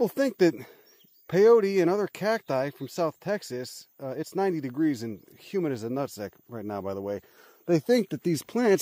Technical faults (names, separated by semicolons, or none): none